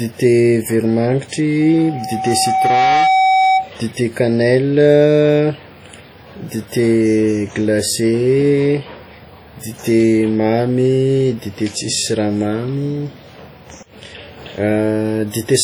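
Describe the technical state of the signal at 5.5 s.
At 5.5 s the speech carries heavy codec damage, present across the whole clip rather than at this moment alone. It is likely WMA compression at a rate that fits about 32 kbps. Long transform blocks smear quantisation noise over tens of milliseconds, so the sound rings and turns washy, with a hiss that rises and falls with the signal. Nothing lies above about 20.1 kHz.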